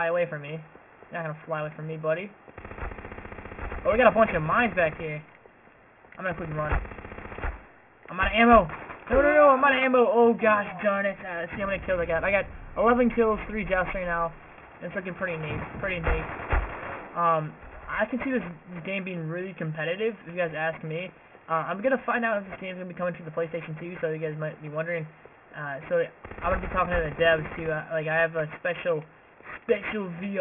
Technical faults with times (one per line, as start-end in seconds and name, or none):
0.00-30.40 aliasing